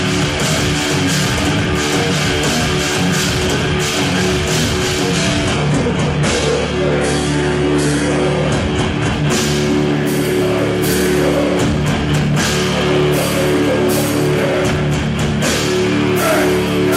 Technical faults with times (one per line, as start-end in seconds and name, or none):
5.13-9.13 adaptive stream at a lower bitrate